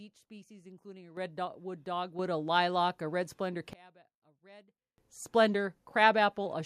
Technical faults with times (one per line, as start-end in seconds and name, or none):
1.17 microphone volume stepped up
2.19 microphone volume stepped up
3.73-4.98 one channel inverted